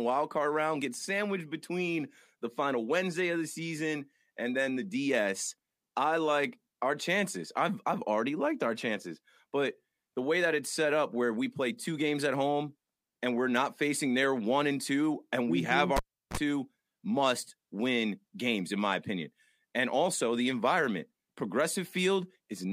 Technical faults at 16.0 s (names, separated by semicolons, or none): cable pulled and plugged in